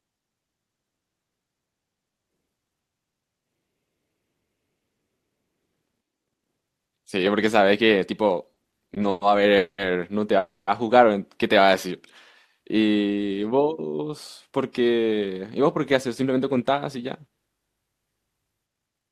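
From 8.53 to 9.24 s, late packets repeatedly emptied the jitter buffer, causing stutter: eight stalls, the longest 110 ms, stretched the last sound for 260 ms in total, so the speech drags and catches.

Two call audio freezes follow, at 9.57 to 9.81 s and 10.38 to 10.70 s, likely from packets held up in transit. The last sound is drawn out and fades, leaving 90 ms and then 190 ms of silence, before the speech resumes where it stopped.

From 14.46 to 16.75 s, a jitter buffer speed-up trims the backlog by cutting about a fifth of a second in short pieces. The speech runs at 109% speed, hurried but at unchanged pitch.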